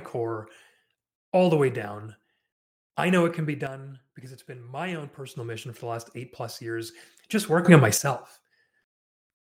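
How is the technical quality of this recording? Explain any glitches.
The recording has two sudden gain jumps in this speech. From 3.67 to 5.36 s, right after "know it can be", the level drops by about 7 dB. From 7.65 to 7.98 s, after "eight plus years just", it jumps up by about 11 dB. Each step happens between adjacent samples, likely a gain setting applied without a ramp. The background noise shifts together with the speech, which rules out the speaker simply changing loudness, and there is no gradual swell as with compressor pumping.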